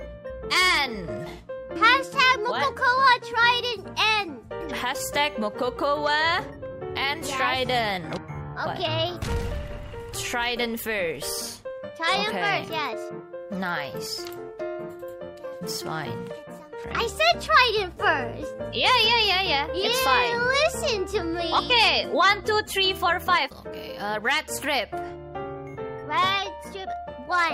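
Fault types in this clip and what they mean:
Clock drift between sender and receiver: the sending device's clock runs around 5 percent fast, so audio arrives quicker than it is played and the buffer keeps overfilling. Unlike random network jitter, the pressure is steady and always in one direction, lasting the whole clip.
Repeated timing corrections: to keep up, the receiver trims short pieces again and again from 0.01 s to 27.27 s, pushing playback to 105 percent speed. Unlike packet-loss dropouts, nothing goes silent; the cuts land at uneven intervals as small hiccups and a slightly rushed, unsteady tempo.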